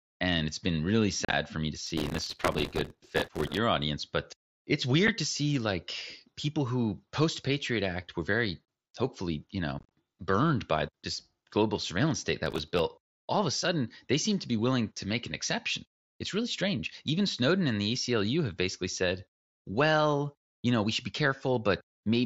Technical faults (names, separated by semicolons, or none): unconcealed Bluetooth headset packet loss; processor overload crackle